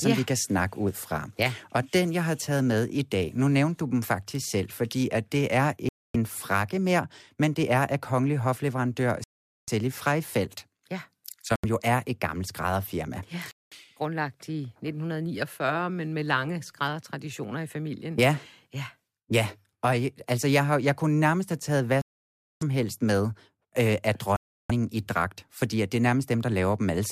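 Bluetooth stalls at 5.89–6.16 s, 9.24–9.70 s, 11.56–11.65 s (before "jo er et gammelt"), 13.51–13.73 s (before "grundlagt i"), 22.02–22.63 s (between "nærmest have taget hvad" and "helst med øh af") and 24.36–24.71 s. The speech drops to silence for 79 to 599 ms, then resumes. The likely cause is radio interference delaying packets until the receiver's buffer emptied, pausing playback until retransmissions arrived.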